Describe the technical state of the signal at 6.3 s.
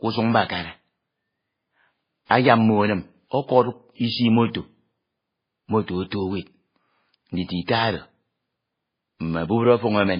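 At 6.3 s the speech sounds muffled, with nothing above about 5.1 kHz and two kinds of coding artefacts layered together, as it does throughout. This is likely transcoding between lossy codecs: a very low-bitrate MP3-like stage set the cut-off, then a WMA encoder re-coded those flaws and added its own.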